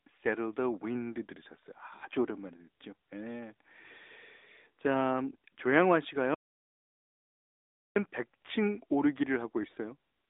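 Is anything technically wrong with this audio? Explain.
Yes, there are two faults. Throughout the speech, AMR narrowband mobile codec damage is plainly audible. Content is confined to roughly 250 Hz to 3.7 kHz, with nothing above 3.8 kHz. Frames are rebuilt from a vocal-tract model and sparse pulses, so the voice sounds buzzy and synthetic, consistent with a mid-rate mode near 10.2 kbps. On a spectrogram the top is sharply empty.

From 6.34 to 7.96 s there is an audio dropout to silence lasting about 1.6 s. The sound cuts off abruptly and returns mid-flow, with no room tone in the gap, most likely because the input was lost while recording continued. The waveform shows a flat, silent stretch there.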